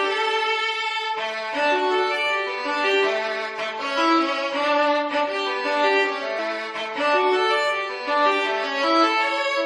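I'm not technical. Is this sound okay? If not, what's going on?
No. At 6.37 s there is a very brief blip caused by damaged data in a compressed stream: part of the file is corrupted, so the player misreads it and skips to the next readable piece.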